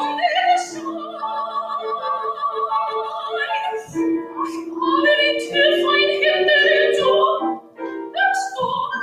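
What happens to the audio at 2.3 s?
A speech-oriented noise suppressor is running on sound it wasn't built for. It treats steady or fading parts as background noise and keeps pulling them down, so the level pumps and thins throughout, swinging by roughly 15 dB.

At 2.3 s the sound is being cut by the noise suppressor. Between 0.66 and 2.57 s it mistook this sound for noise and turned it down harder than the rest, by up to about 12 dB. Held portions sink and decays shorten while sharper onsets mostly get through.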